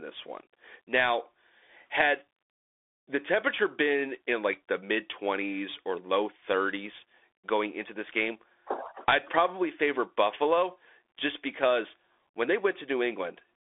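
Throughout, the speech carries the Bluetooth CVSD headset codec: nothing passes above 3.7 kHz, and one-bit slope tracking leaves scratchy s sounds and granular hiss that a clean band-limit wouldn't.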